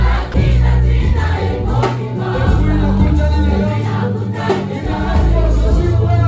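At 0.32 s a brief 20 ms slice of the audio gives way to steady, flat noise, likely sound dropped by the voice detector and filled with comfort noise rather than a true dropout to silence. The audio carries nothing above 8 kHz, consistent with a wideband call codec at 64 kbps.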